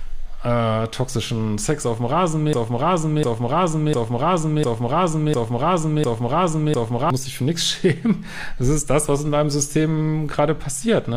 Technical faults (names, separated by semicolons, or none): broken-record loop